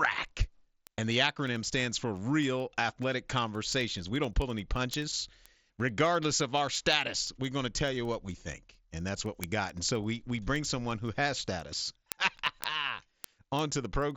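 Speech carrying word clock ticks from 0.18 s to 14.11 s, about ten per second, each a single sample dropped or repeated as an unlocked receiver's clock, roughly 200 ppm off, slips. Random crackle wanders; this pulse stays evenly spaced. Wideband mSBC headset coding adds light graininess.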